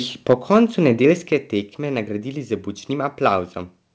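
From 0.29 to 0.58 s the microphone's input gain was likely set too high, pushing peaks about 4 dB past the converter's limit. This microphone overload flattens the tops of a small fraction of the waveform, giving the loudest moments a harsh, crackly edge.

At 0.33 s, inside that distorted stretch, the call software likely reacted by stepping the microphone volume down, cutting the level by about 3 dB at once. At 1.32 s it stepped down again by about 6 dB, just before "tekme nagradili z", so the sound and background abruptly become quieter. Throughout, the call path carries nothing above 8 kHz.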